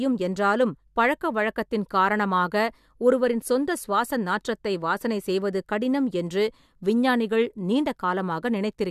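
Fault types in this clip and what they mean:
No technical faults can be heard in this speech recording. There is nothing to list for it.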